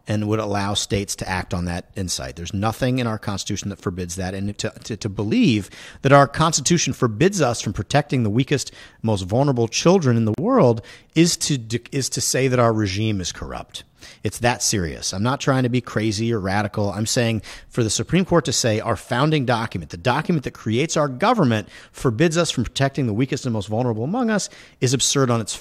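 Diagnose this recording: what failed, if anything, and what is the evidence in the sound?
A gap at a join of encoded pieces sits at the codec stage, where separately encoded segments were spliced. After "vulnerable children in the", the speech breaks off from 10.34 to 10.38 s, a gap of about 39 ms with smeared edges, then resumes with "world is to is" exactly where it left off. Encoder start delay and last-frame padding were left in at the join. Unlike a network dropout, no speech is lost or concealed. Silence is simply inserted.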